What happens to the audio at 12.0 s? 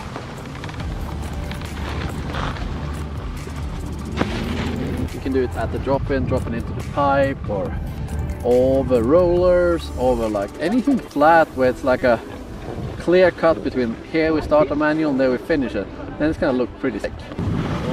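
Damaged data in the compressed stream corrupts the audio from 11.99 to 12.02 s. The decoder misreads the frames there, loses sync and hunts for the next valid frame header, so the audio breaks into a short chirp, squawk, click or hole lasting about 34 ms.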